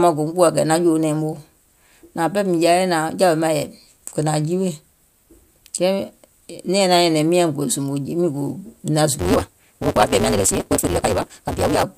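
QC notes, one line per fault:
9.19–11.83 s, block size mismatch (truncated): the speech abruptly starts running ahead at about 1.88 times normal speed while the timbre stays, and a steady buzz at 188 Hz sits under it. A downstream stage is reading shorter blocks than the upstream stage writes, which fits 256-sample reads, so the tail of every block is discarded. The periodic splice at each block boundary produces the buzz, and the missing material compresses the timing.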